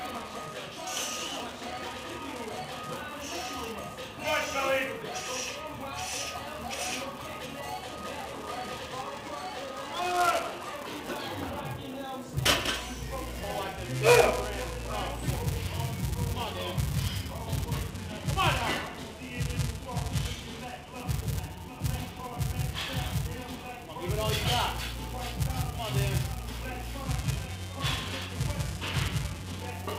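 Throughout the clip there is buffer tearing: the writing program and the reading hardware have drifted so that they cross inside every period. A small sliver of each buffer, a few percent, holds audio from one lap earlier, a few milliseconds stale, with hard joins on either side. The result is a steady robotic buzz at 375 Hz, which fits a 128-sample buffer. The buzz is present only while sound is playing. Unlike underrun dropouts, it leaves no silent gaps and does not come and go irregularly.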